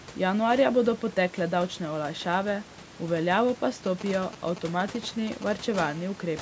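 Speech, and a mobile phone nearby is getting into it. Right after "olajšave v veljavo pa", from 3.86 to 5.76 s, you get GSM signalling bursts: a galloping dit-dit-dit of brief 217 Hz buzzes, fairly loud, not far under the speech. That's a 2G handset sending short radio bursts while it negotiates with the network, with the audio circuitry rectifying them into sound. Then from 5.80 to 6.37 s it settles into a steady GSM phone buzz, a raspy 217 Hz drone full of harmonics, about 20 dB below the speech. The phone is now transmitting continuously as in a call, bursting 217 times a second, and each pulse gets demodulated into the audio path.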